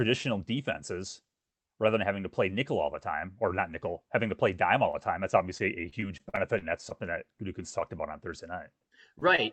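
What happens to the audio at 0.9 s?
At 0.9 s the speech is intact, with only the steady coding texture and 8 kHz band limit of the call path running through it.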